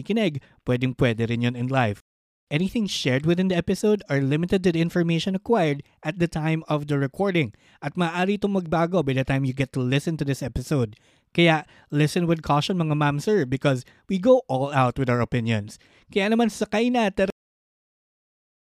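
Speech, and it has a cut-off end: right after "naman sakay na" the audio just stops at about 17.30 s, mid-sound, and drops straight to digital silence with no decay at all. That dead air runs for roughly the last second and a half. It's what you get when the final buffers never made it to the file or the output, so the recording ends partway through whatever was being said instead of fading out naturally.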